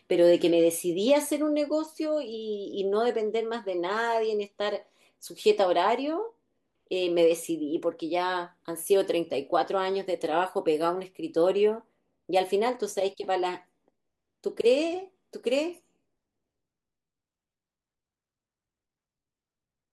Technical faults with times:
none

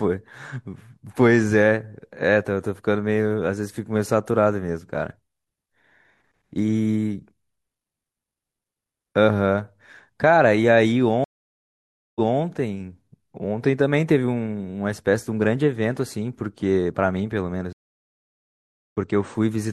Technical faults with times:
11.24-12.39 stream reconnect
17.73-18.96 stream reconnect

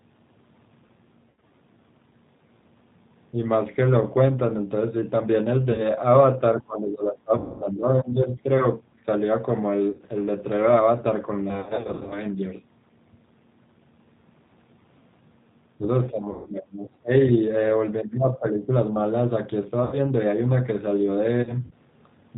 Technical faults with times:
0.00-22.38 G.729 codec
1.30-1.52 VoIP packet loss concealed by the speech codec
5.72-5.84 VoIP packet loss concealed by the speech codec
6.56-8.49 speech suppressed in double talk
7.38-7.65 VoIP packet loss concealed by the speech codec
9.93-10.01 VoIP packet loss concealed by the speech codec
11.51-12.23 VoIP packet loss concealed by the speech codec
16.11-17.11 speech suppressed in double talk
16.31-16.50 VoIP packet loss concealed by the speech codec
19.84-19.96 VoIP packet loss concealed by the speech codec
21.43-21.73 VoIP packet loss concealed by the speech codec

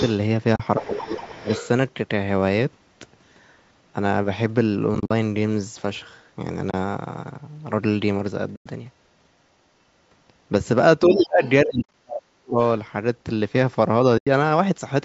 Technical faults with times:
0.00-0.12 other side's voice leaking through
0.56-0.60 AAC frame loss with muting
0.78-1.46 speech suppressed in double talk
0.79-1.68 other side's voice leaking through
4.95-5.11 AAC frame loss with muting
6.71-6.74 AAC frame loss with muting
8.56-8.66 AAC frame loss with muting
11.04-12.59 speech suppressed in double talk
11.43-11.50 other side's voice leaking through
11.82-11.94 AAC frame loss with muting
14.18-14.27 AAC frame loss with muting

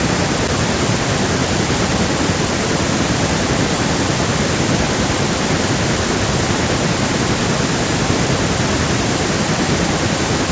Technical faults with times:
none

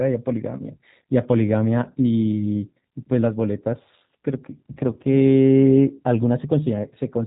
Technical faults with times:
0.00-7.27 G.729 codec

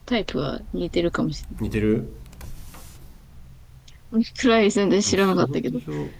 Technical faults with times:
none

